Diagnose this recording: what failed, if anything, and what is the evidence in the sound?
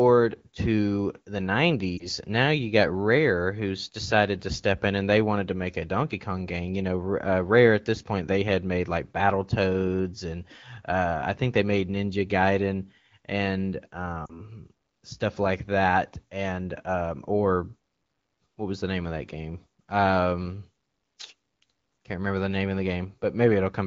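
Lost AMR speech frames at 1.97 to 2.09 s and 14.25 to 14.42 s, from the radio link: a brief dip, then a drop to near silence. The decoder reuses the last good pitch and vocal-tract settings at falling gain, which fits one, then two, lost 20 ms frames.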